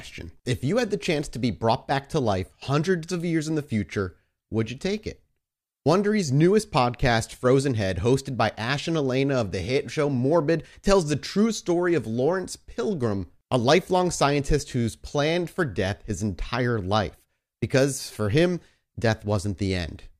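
No technical faults can be heard anywhere in this speech recording. There is no moment in it that calls for a time mark or an explanation.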